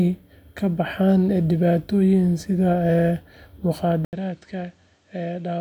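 Input switched to a poorer device at 4.05 s in this speech clip, likely a change of microphone: after an 80 ms silence, sound above 8.7 kHz vanishes, the level drops roughly 10 dB, and a faint new noise floor appears.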